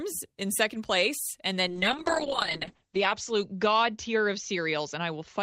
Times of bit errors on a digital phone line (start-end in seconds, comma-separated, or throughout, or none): none